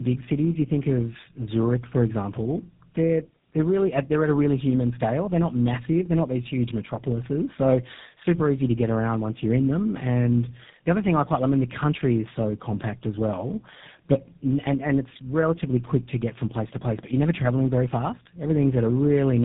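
Throughout, the speech shows tandem speech coding: it sounds rough, muffled and warbly, with nothing above 3.8 kHz. The artefacts point to two low-rate speech codecs in a row, likely G.729A then GSM full rate, each re-coding the previous one's degraded output.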